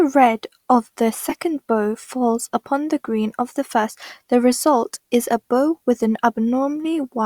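At 1.29 to 1.36 s the speech is hit by a corrupt frame decoded. Flipped bits in a few consecutive compressed frames were played anyway. Misread gains and codes push energy to the wrong frequencies. The result is an error peaking around -5 dBFS. At 2.39 to 2.42 s it happens again, apparently to a single frame. This one is much quieter and short, peaking around -15 dBFS.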